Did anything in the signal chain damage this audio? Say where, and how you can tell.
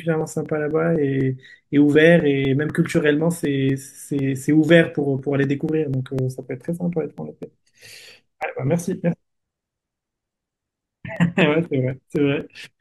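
Yes, at the driver or buffer stage: periodic USB or driver dropouts from 0.21 to 12.66 s, a tick about every 0.249 s under the speech. Something blocks the bus on a fixed schedule, and about a millisecond of audio gets skipped each time, around fifty times in all.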